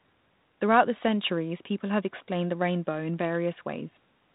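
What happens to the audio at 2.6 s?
At 2.6 s the speech plays through intact, with no dropout, glitch or other fault at that moment.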